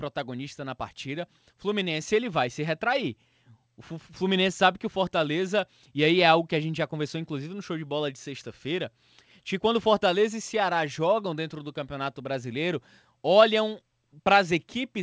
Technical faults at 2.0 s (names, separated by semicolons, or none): microphone volume stepped up